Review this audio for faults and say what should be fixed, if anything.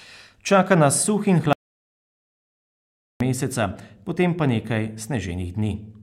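Audio dropout to silence from 1.53 s to 3.20 s: the speech cuts off mid-flow and about 1.68 s is replaced by silence with no room tone, then resumes abruptly. The likely cause is a lost input, where the recorder kept writing silence. Secure cables and connections, confirm no mute is engaged, and monitor input levels live during recording.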